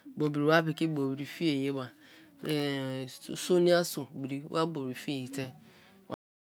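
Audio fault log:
6.14 s, cut-off end: the speech just stops dead partway through a sound, and from there to the end it's pure digital silence, a bit over 0.4 s of it. There's no tail or room decay at all, which is what you get when the final buffers of audio never made it out to the file or the output. The recording or playback quit before flushing them, so the sound is chopped rather than finishing naturally.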